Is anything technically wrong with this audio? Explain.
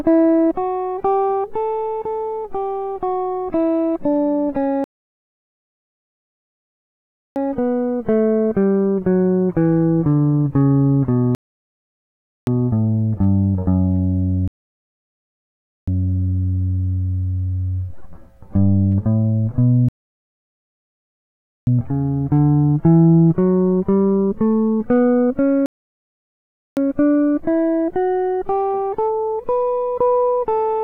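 Yes. The music stops dead five times, at 4.84 to 7.36 s (2.5 s), 11.35 to 12.47 s (1.1 s), 14.48 to 15.88 s (1.4 s), 19.89 to 21.67 s (1.8 s) and 25.66 to 26.77 s (1.1 s). Each time it falls to silence and then picks up exactly where it left off, with nothing skipped. These are rebuffering stalls. The player used up the audio it had downloaded and waited for more before continuing, which adds dead time without losing any of the music.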